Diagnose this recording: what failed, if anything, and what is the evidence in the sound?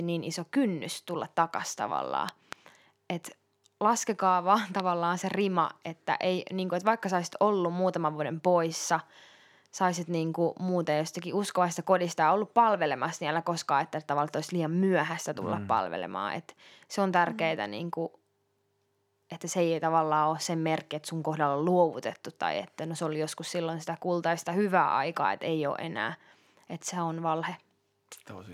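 Loud pops land on top of the speech: a quick double pop from 2.29 to 2.55 s, then a single one at 4.80 s, both well above the speech level, which runs on beneath. Analogue wiring stage: likely a voltage spike from a connector, switch or static.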